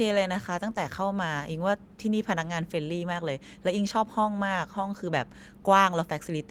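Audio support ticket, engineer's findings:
No faults found on review.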